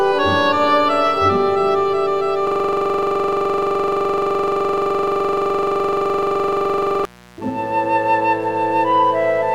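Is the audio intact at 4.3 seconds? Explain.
No. At 4.3 seconds the music is caught in a system hang loop running from 2.47 to 7.05 s. The machine stalled while the audio hardware kept replaying one 42.67 ms chunk, which fits a 2048-sample buffer, over a hundred times. This produces a rough buzzing stutter at 23.4 Hz. On the waveform it shows as an identical block repeating exactly, and on the spectrogram as fine vertical striping with evenly spaced harmonic lines.

A mains buzz underlies it as well, present throughout the clip. Switching spikes from the 60 Hz supply, arriving twice per cycle, leak into the signal as a raspy buzz roughly 25 dB below the music. On a spectrogram this appears as a comb of horizontal lines at multiples of 60 Hz reaching into the kHz range.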